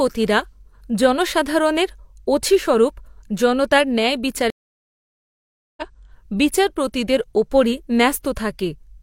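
At 4.50 s the connection drops and the player reconnects, starting a fresh decoder mid-stream: a stream reconnect. The speech cuts to 1.27 s of silence, then resumes at 5.82 s on "বিচারপতিদের উপরই", roughly 0.7 s further on, leaving a gap in the speech.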